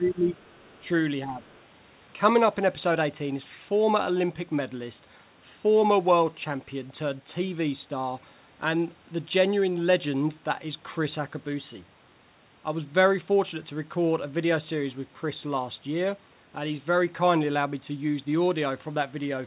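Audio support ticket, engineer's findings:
Speech suppressed in double talk: near-end speech ducks at 0.00–0.38 s, 0.81–0.90 s and 1.25–1.42 s, by around 10 dB at worst, near 5 dB in the last. Likely echo canceller misreading overlapping far-end and near-end talk as echo and attenuating both.

Other side's voice leaking through: faint second voice at 0.44–0.88 s and 1.45–1.59 s, roughly 35 dB under the main talker, on a narrowband path with nothing above 4 kHz, consistent with G.711 mu-law at 64 kbps. Likely incomplete echo cancellation of loudspeaker playback.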